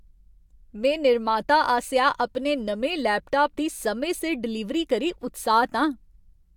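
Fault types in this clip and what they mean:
No faults detected in this speech recording.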